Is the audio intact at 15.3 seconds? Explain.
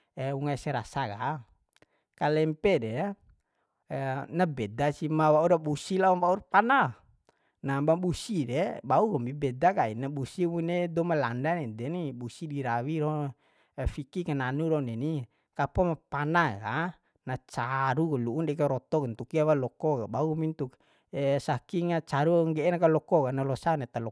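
Yes, the speech at 15.3 seconds is intact, with no dropout, click, distortion or other technical fault at that moment.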